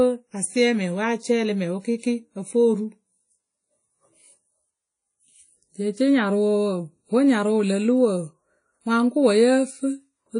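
A low-bitrate transform codec, likely early WMA compression, is running throughout, and its damage is plainly audible. At a rate that fits around 32 kbps, the encoder spends too few bits per block, so quantisation noise smears over tens of milliseconds and quieter spectral detail is discarded. Nothing survives above 10.1 kHz. The speech sounds ringing and washy, with a hiss that swells and fades along with the voice.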